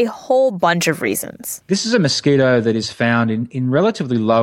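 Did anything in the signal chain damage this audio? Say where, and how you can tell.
No, nothing along the chain from capture to playback has left an audible mark on this speech recording.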